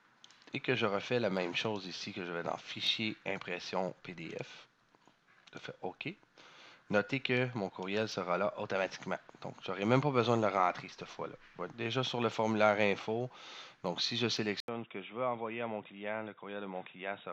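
At 14.60 s the audio cuts out for about 80 ms, then returns duller, boxier and about 10 dB quieter, staying that way to the end. Nothing passes above 3.8 kHz, and a faint new noise floor sits far below the signal. The likely cause is an input switched to a poorer device, a narrower-band microphone or headset profile. On a spectrogram the energy above 3.8 kHz stops abruptly after a thin blank gap. The waveform shows a brief flat line, then a lower envelope.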